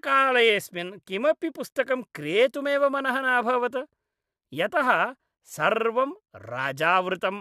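No technical faults can be heard in this recording.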